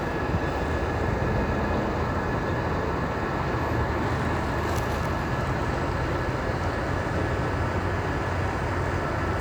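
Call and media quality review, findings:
Doubled audio track throughout: likely a second, slower capture path mixed in. A dry full-band copy trails roughly 300 ms behind, about 10 dB quieter, giving a flat slap-back echo.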